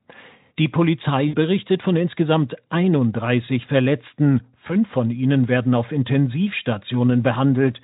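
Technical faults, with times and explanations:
1.27–1.35 s and 4.67–4.72 s, VoIP packet loss concealed by the speech codec: about 60 ms, then 20 ms, of audio went missing just before "von insgesamt" and "von ihnen werden auf". The decoder repeated its last pitch and spectral shape at falling gain, smearing the sound into a brief buzzy tone or coloured noise that fades.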